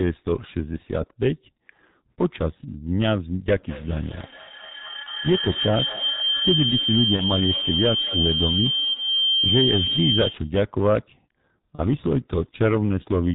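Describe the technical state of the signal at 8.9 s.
From 8.93 to 8.97 s a brief fading smear replaces the speech. This is VoIP packet loss concealed by the speech codec: the decoder stretched its last pitch and filter to cover what fits a single lost 30 ms frame.

Underneath, a feedback howl near 3 kHz runs from 3.52 to 10.57 s, with its loop repeating roughly every 200 ms and peaking about 1 dB below the speech. A microphone-to-loudspeaker loop is regaining level on each pass.

Loud peaks crackle harshly. That is hard clipping, with the signal driven about 9 dB past what a stage could pass, flattening a few percent of samples.

The whole band sounds muffled and hoarse, with nothing above 4 kHz and smeared consonants. This comes from the G.723.1 codec, and the heavy damage fits its 6.3 kbit/s rate.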